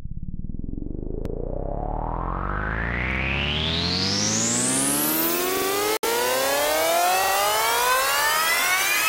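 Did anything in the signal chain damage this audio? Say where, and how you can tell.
Yes. At 1.25, 3.11, 5.57 and 7.24 s a roughly 46 ms snippet stutters with hard joins. This is a repeated buffer at the driver stage, consistent with a 2048-sample buffer replayed once at 1.25 s and twice elsewhere.

At 5.97 s the sound drops to 62 ms of silence, then resumes. The likely cause is a Bluetooth stall in playback, where delayed packets let the headphone buffer run dry.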